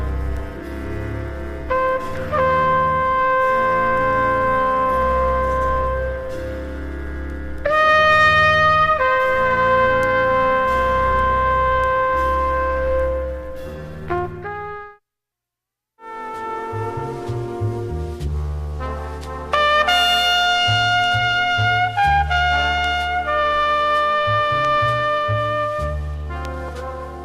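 Nothing stood out as a technical problem on listening.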